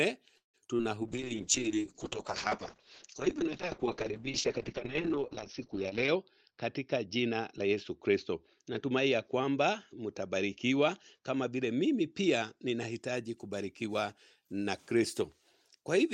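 Packets in this speech recording went missing repeatedly from 0.37 to 0.82 s: four gaps, the longest 164 ms, with 208 ms patched by extending the previous sound and 60 ms left silent. Nearly half that stretch is concealment, so this repeated packet loss sounds choppy and robotic. From 1.02 to 13.07 s there is a call bitrate drop. The bandwidth estimate collapsed, and the encoder fell from 32 to 7 kbps, staying at the bottom for about 5.1 s. Coarser coding and a bandwidth cut from 20 kHz to 6 kHz leave the sound muffled and rough until the rate recovers. Inside that stretch, from 5.93 to 8.17 s, an overfilled jitter buffer trimmed its backlog by repeatedly dropping pitch-period-sized slices, around 150 ms in total. This jitter buffer speed-up makes the audio run at 107% of normal speed with unchanged pitch, so it sounds noticeably hurried.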